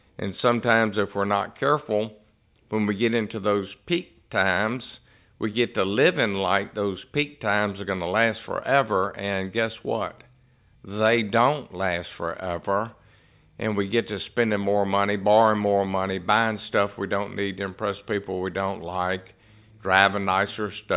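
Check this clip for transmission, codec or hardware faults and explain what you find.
No faults can be heard anywhere in this speech.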